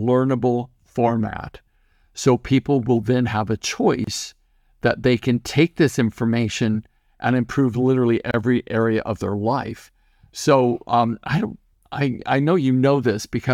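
At 4.04 s, right after "will then have a", the speech drops out for about 30 ms, and again at 8.31 s, between "information and improve literally" and "area of their life", for about 29 ms. Both are gaps at a join of encoded pieces. The segments were encoded separately and butted together untrimmed, so encoder start delay and last-frame padding leave brief silences. You hear brief dropouts with smeared edges, then the speech resumes exactly where it stopped.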